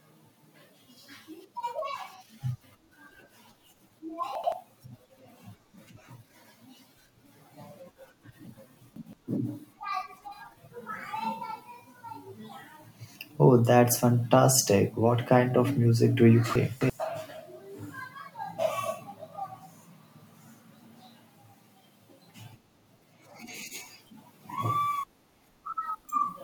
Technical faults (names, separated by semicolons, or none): chunks out of order